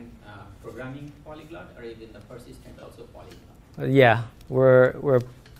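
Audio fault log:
2.79–2.87 s: lost LE Audio frames. About 50 ms of audio goes missing within an 80 ms stretch, with the longest gap around 40 ms, which fits several dropped 10 ms LC3 frames. The decoder conceals each gap by replaying the last good spectrum with randomised signs. That keeps the overall level and timbre, but the phase coherence is lost, so the sound turns into a brief noisy smear. Over the longer run, the concealment starts fading after the first few frames.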